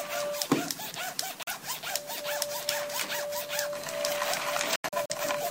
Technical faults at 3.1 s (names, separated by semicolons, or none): none